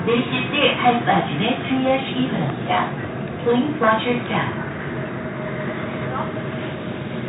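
No technical faults can be heard anywhere in this recording of sounds. The audio runs continuously from its first moment to its last, with nothing that points to a problem in capture or playback.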